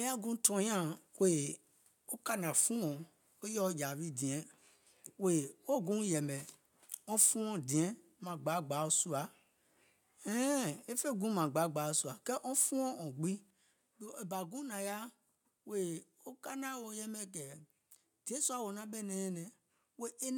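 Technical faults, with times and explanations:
No technical faults are audible.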